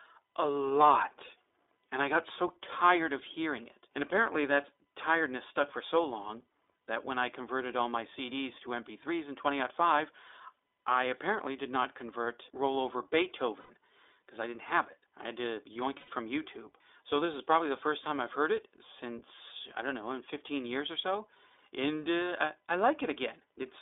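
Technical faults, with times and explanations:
throughout iLBC codec: the speech is confined to a telephone band of roughly 300 Hz to 3.6 kHz and has a plainly rough, synthetic edge, because each 20 ms frame's excitation is coded independently at low rate, consistent with iLBC's 15.2 kbps mode.
13.60–13.71 s, 15.98–16.10 s and 22.24–22.26 s lost iLBC frames: about 100 ms, 100 ms and 20 ms of audio are missing. The decoder fills each gap by repeating the last pitch cycle mixed with noise, heard as a brief held, buzzy vowel. Because every frame stands alone, normal speech resumes almost immediately afterwards.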